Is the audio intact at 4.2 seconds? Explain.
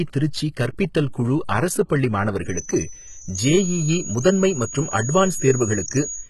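No. At 4.2 seconds two faults overlap.

A feedback whistle runs from 2.43 s to the end: a single steady tone at 6.3 kHz sits behind the speech, about 10 dB below it. This is likely a loudspeaker-to-microphone loop poised just short of feedback, so one frequency keeps ringing without growing. Unlike a full feedback howl, it never builds up or takes over. It stays a thin, fixed-pitch whistle that drifts slowly in level.

Heavy HE-AAC compression is present across the whole clip, and the band above 11.8 kHz is empty. The sound points to a very low bitrate, which fits something around 16 kbps. This is likely spectral band replication: only the lower spectrum is coded, and the treble is rebuilt by copying lower bands upward under a coarse envelope, so harmonics don't line up above the crossover. What separates it from plain low-bitrate AAC is that the treble extends this far but sounds synthetic rather than simply dull. 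The s sounds come out gritty, metallic or lispy.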